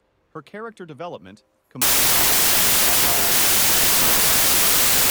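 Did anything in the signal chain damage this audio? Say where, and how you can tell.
Yes, at the sample-format conversion stage. From 1.82 s to the end, loud noise buries the sound and it runs 1.33 times fast. This is wrong sample width: packed 24-bit data read as 32-bit.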